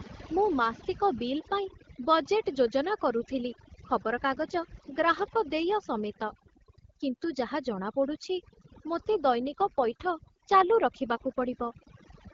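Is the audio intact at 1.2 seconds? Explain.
No. At 1.2 seconds, as throughout, overdone noise removal is audible: bands near the estimated noise are cut almost to nothing, leaving a lowered background with twinkling specks and quiet parts of the voice lost with it. Unlike codec roughness or dropouts, the losses are scattered per-frequency rather than whole moments.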